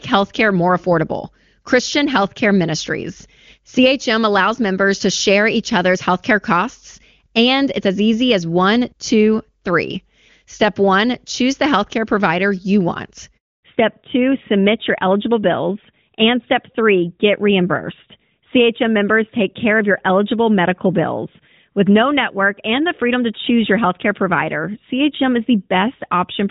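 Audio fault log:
13.37–13.63 s, handover gap: Right after "healthcare provider you want" the speech fades out within a few tens of milliseconds and leaves 260 ms of dead silence. The call was passed between networks, no speech frames arrived during the switch, and whatever was said then is lost.
13.63 s to end, fallback to narrowband: From the gap onward the speech sounds duller and rougher, with nothing above 4 kHz. The call likely fell back from HD Voice to the older narrowband AMR codec, which cannot carry the upper band that the clear wideband AMR-WB audio before the gap had.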